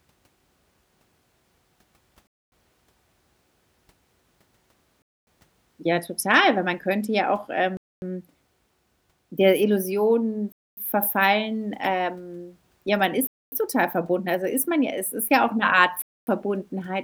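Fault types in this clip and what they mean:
Gap between chunks: the speech arrives in blocks of about 2.5 s, and a 250 ms stretch of dead silence lands at every join, so nothing gets dropped but the flow keeps stopping. You hear it as hard-edged holes at a steady rhythm, at 2.27, 5.02, 7.77, 10.52, 13.27 and 16.02 s, which points to padding at each chunk boundary or a player that starts each chunk late.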